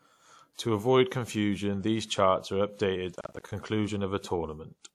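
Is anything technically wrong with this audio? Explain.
Yes. From 3.16 to 3.52 s, just after "confusion these charts are", the speech breaks into a burst of processor overload crackle. The processor kept missing its deadlines for short audio buffers, and each miss left a hard-edged gap of silence. The spacing of the ticks points to buffers of around 10 ms, with about twenty misses across the stretch. A single dropout would be one clean hole, but here many tiny gaps pile up into a gritty tearing over the speech, which then stops.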